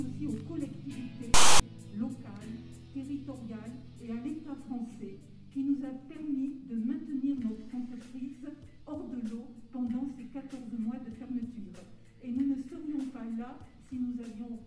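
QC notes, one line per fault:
1.34–1.60 s, file tags played as audio: for about a quarter of a second the audio is replaced by a loud, harsh rasp that starts and stops with hard edges. A block of text metadata has been decoded as if it were sample data. Character bytes cluster in a narrow range of values, so the waveform sits pushed to one side of zero, which heard as a DC-offset buzz rather than clean static, before the audio resumes abruptly.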